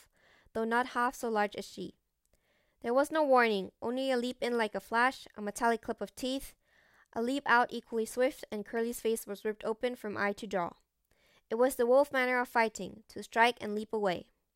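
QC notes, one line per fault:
No faults to note for this clip.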